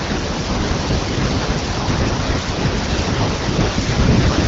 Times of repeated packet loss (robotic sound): none

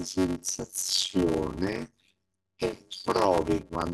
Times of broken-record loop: none

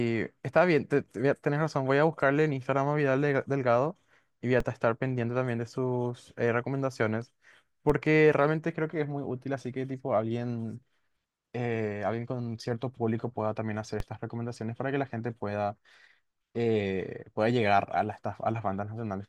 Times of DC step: 4.60, 7.90, 14.00

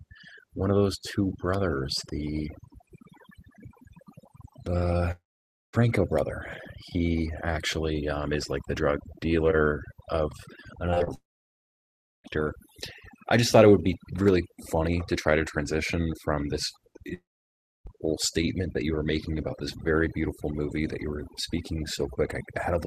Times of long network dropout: 5.11-5.75, 11.14-12.26, 17.14-17.87

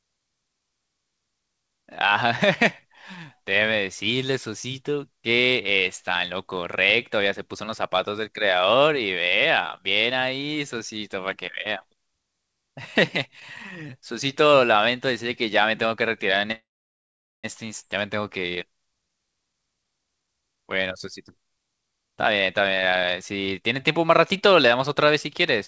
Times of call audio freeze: 16.52-17.46

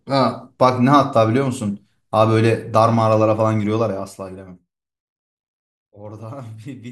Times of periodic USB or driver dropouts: none

